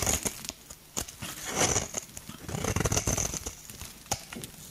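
Gain pumping runs through the whole clip: the gain ducks by roughly 5 dB under every loud sound, flattening the dynamics. The likely cause is excessive input gain driving a fast limiter. On a waveform, the level visibly rises and falls.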